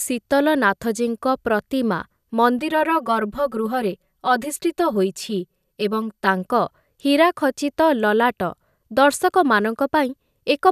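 From 2.59 to 6.42 s the speech turns hollow or phasey with fixed notches: channel delay (comb filtering), one side lagging around 5 ms, cancelling from around 100 Hz upward.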